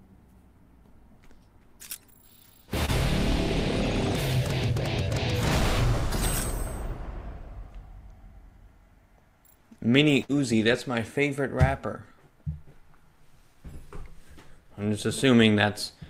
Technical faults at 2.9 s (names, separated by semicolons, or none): short concealed packet loss